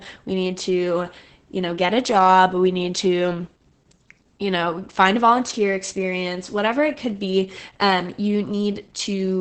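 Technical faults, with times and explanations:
throughout, Opus voice compression: the speech is muffled, with nothing above 8.6 kHz, and heavily damaged by SILK's coarse excitation coding, which fits a bitrate near 10 kbps. That coding gives a hoarse, slightly robotic edge, which a plain low-pass filter would not add.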